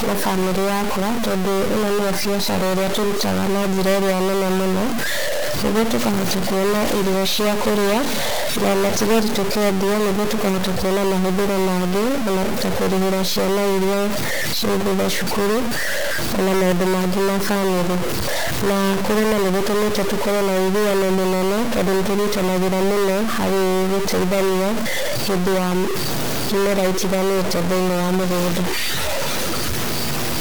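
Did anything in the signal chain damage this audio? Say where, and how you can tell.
Yes. A stuck bit runs through the whole 30-second speech recording and is most likely a fault at the converter or its data lines. Every part of the sound carries a harsh, buzzy distortion, and even the pauses are filled with noise instead of falling silent. That noise in silence is what separates it from clipping or overdrive, which only distort loud passages. The error step sits near -15 dBFS, which points to a fairly high-order bit.

A train of clicks appears from 17.70 to 19.01 s: about fifteen similar pops at roughly 10 per second, spaced unevenly and peaking around 5 dB above the speech. The likely cause is electrical interference or a struggling interface, so the damage happens at the wiring or interface stage. Because the clicks add energy rather than leaving gaps, and because each one has much the same shape, they are easy to tell apart from buffer dropouts.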